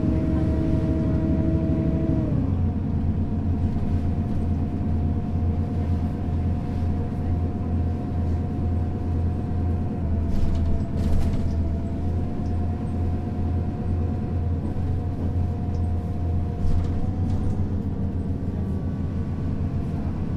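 From 10.02 to 12.01 s the sound runs 5.4% slow and drops 97 cents flat, then snaps back. From 17.02 to 17.75 s it runs 5.4% fast, 92 cents sharp. Each is likely a drift correction step, where clock-matching software abruptly shifted playback rate to rebalance its buffer.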